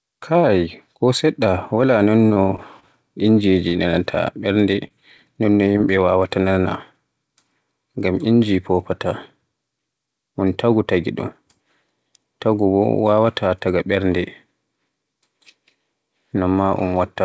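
Between 2.28 and 2.85 s the speech turns choppy and robotic, with small pieces dropping out. This is repeated packet loss: four separate gaps, the longest about 27 ms, each patched by extending the preceding sound, so roughly 15% of that stretch is synthetic fill.

Short concealed packet losses follow at 3.69, 3.91, 4.87 and 5.72 s, each heard as a brief smear or wobble. Between 20 and 40 ms of audio failed to arrive each time, and the receiver bridged it by continuing the previous sound before blending back into the real signal. Throughout, the band stops at 8 kHz, consistent with a wideband G.722 call path.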